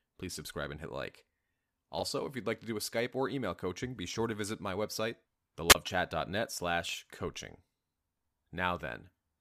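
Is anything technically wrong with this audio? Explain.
Yes, there are three kinds of fault in this speech recording.

Sample clock jitter runs throughout: the converter's clock wobbles by a couple of microseconds, mistiming samples and adding a roughness roughly 30 dB down that swells on loud, bright passages.

Chunks out of order occur at 1.98 to 2.03 s and 6.89 to 6.93 s: a 21.33 ms block plays one chunk late, swapping positions and producing a brief jumbled stutter.

A wireless microphone squelch dropout occurs at 5.69 to 5.75 s: the radio link fades until the receiver mutes for about 27 ms, heard as rising hiss, a hole of near silence, then the sound's return.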